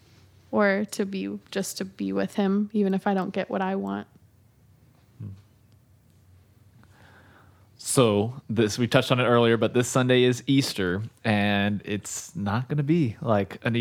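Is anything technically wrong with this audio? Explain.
Yes. There is a sudden gain jump from 12.20 to 12.29 s, just before "not going". The speech drops by about 6 dB in an instant, and the background noise falls with it. The likely cause is a digital gain change applied from one sample to the next without a ramp.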